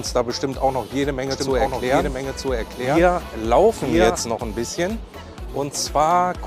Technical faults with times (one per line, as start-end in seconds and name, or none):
1.31-4.21 doubled audio track